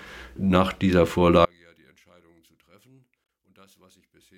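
One channel inverted, from 1.45 s to the end: at this point the sound collapses, dropping by about 37 dB and leaving only a faint residue. The likely cause is one stereo channel playing with reversed polarity, so that when left and right are summed to mono, everything they share cancels. Centred material and low end all but disappear, and what survives is just the small difference between the two channels.

Damaged data in a compressed stream, from 3.23 to 3.25 s: a brief blip cuts through the already faint audio for about 26 ms. Corrupted bytes in the encoded file would make the decoder misread the affected frame, lose its place and hunt for the next valid frame header, producing this short burst.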